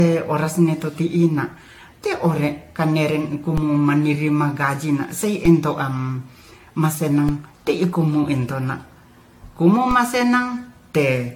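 Speech with two kinds of technical fault. Throughout, the sound is swirly, smeared and hollow, and consonant attacks are blurred. That is more damage than a single AAC-LC encode at around 96 kbit/s would cause, and nothing remains above 19.3 kHz. The likely cause is generation loss from roughly ten successive AAC-LC encodes, each quantising on a shifted frame grid so the noise and spectral holes pile up. A single low-bitrate encode would sound thin but not this washy. Separately, four DC steps are heard as low thumps at 3.58 s (just after "te'ore kaneren"), 5.45 s, 7.29 s and 9.91 s. Each time the waveform's zero line jumps and then drains away the way a 20 Hz high-pass lets an offset decay. Unlike a dropout or edit click, the speech runs on uninterrupted through each thump, with nothing missing or repeated.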